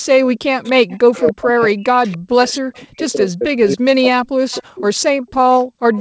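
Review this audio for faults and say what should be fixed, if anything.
From 0.77 to 4.89 s the speech is pulled down in level, by as much as roughly 40 dB at its deepest. This is speech suppressed in double talk. Both ends were likely talking at once, so the echo canceller turned everything down. A canceller with better double-talk detection would prevent it.

Echo leak appears at 1.27 to 1.31 s, 2.09 to 2.15 s, 4.51 to 4.61 s, 5.28 to 5.32 s, and from 5.94 s to the end. Short, faint copies of the voice arrive 284 ms late, mostly about 25 dB below the speech, and at 5.28 s about 40 dB below. The likely cause is a far-end loudspeaker whose canceller let some of its microphone pickup through. A headset or stronger echo cancellation at that end would stop it.

The room sound dips at 5.17 to 5.28 s by about 18 dB, and again at 5.64 to 5.89 s by about 40 dB. This is background gated by the echo canceller. 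It clamped the microphone while the loudspeaker played, then released it. Gentler suppression settings would keep the background steady.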